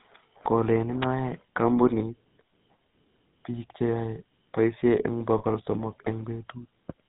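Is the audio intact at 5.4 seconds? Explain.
No. Lost GSM frames occur from 5.38 to 5.44 s, a gap of about 40 ms that fits two missing 20 ms frames. The decoder covers the gap by repeating the last good frame's settings, which leaves a brief rough, metallic ring in place of the real sound.

The audio at that moment also carries the GSM full-rate codec's plainly audible damage. The vocal tract is modelled and driven by sparse, regularly spaced pulses, and nothing above 4 kHz passes, which gives the speech a buzzy, gravelly roughness.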